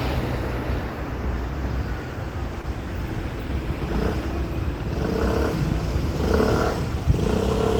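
At 2.61 to 2.65 s there is a short concealed packet loss: about 20 ms of the stream failed to reach the decoder in time, and the receiver covered the gap with roughly 19 ms of synthesised continuation, extending the preceding sound by its pitch or as shaped noise before crossfading back into the real audio. The result is a brief smear or wobble in the sound, with any short transient inside that window possibly lost.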